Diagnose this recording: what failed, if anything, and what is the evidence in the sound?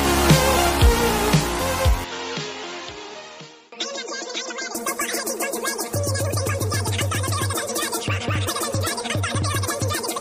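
From 2.04 to 4.75 s the sound abruptly dulls, drops a few dB and loses everything above 7.6 kHz, with faint new hiss underneath: likely the input switched to a poorer device at driver level.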